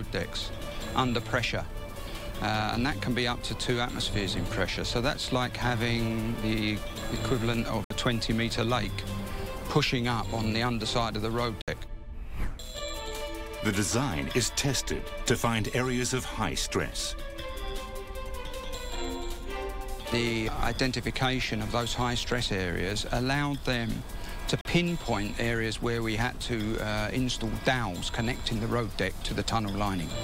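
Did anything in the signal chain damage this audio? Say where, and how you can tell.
Yes. Bluetooth dropout, likely at the wireless playback link: silent holes at 7.84–7.91 s, 11.62–11.68 s (61 ms each) and 24.61–24.65 s (41 ms), with sound resuming further on as if it had kept playing. That fits a few late packets being discarded.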